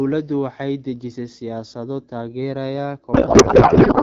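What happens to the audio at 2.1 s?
Nothing goes wrong at 2.1 s; the speech carries on intact through the AMR wideband (HD Voice) coding, which at this 12.65 kbit/s rate keeps it clear.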